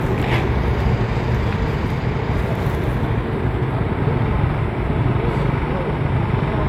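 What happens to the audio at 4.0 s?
Low-bitrate audio saved at a high bitrate affects 4.0 s as it does the whole clip. The artefacts of a heavy earlier encoding remain, likely from a low-bitrate HE-AAC pass that the later high-bitrate MP3 could not undo, with nothing above 20.1 kHz.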